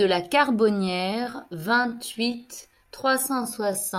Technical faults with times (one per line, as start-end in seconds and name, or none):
0.80-3.98 time-stretched section